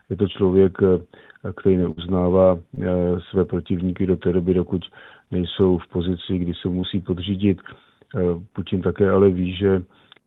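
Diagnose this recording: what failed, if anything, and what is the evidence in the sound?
The network stage failed, downstream of a WebRTC call path. The Opus coding holds the band to about 12 kHz. A burst of packet loss hits from 1.91 to 1.99 s. About 53 ms of the last received sound is stretched out and faded down by the receiver. The audio then jumps ahead. Roughly 60 ms of real signal never arrives. The join sounds like a held, dimming tail followed by an abrupt resume.

Short concealed packet loss occurs twice: 2.75 to 2.79 s and 6.81 to 6.85 s. Each time about 20 ms failed to reach the decoder in time. The receiver extrapolated from the preceding sound for about 20 ms and crossfaded back into real audio. The result is a brief smear or wobble rather than a gap. This is also network loss, hidden by the jitter buffer's concealment.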